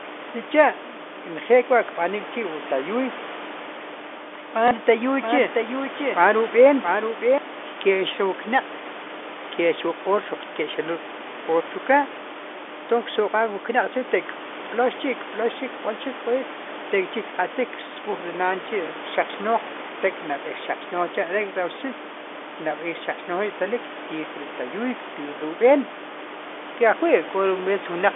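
At 4.68 s, packet loss with the last packet repeated leaves a 30 ms gap that is filled by replaying the previous packet, which fits a single lost 30 ms packet. The result is a small blip. On a spectrogram the repeated slice appears as a duplicated block.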